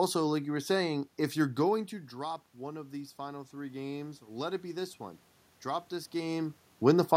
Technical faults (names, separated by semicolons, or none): automatic gain rising